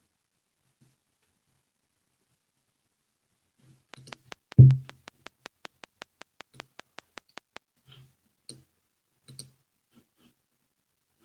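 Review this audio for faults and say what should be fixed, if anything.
A train of clicks runs from 3.94 to 7.58 s: about twenty regular ticks at 5.24 per second, well above the speech, likely from equipment interference. Spectrogram shows evenly spaced vertical broadband lines; the waveform shows sharp spikes. To prevent it, move nearby equipment away from the recording chain and check cables and the interface connection.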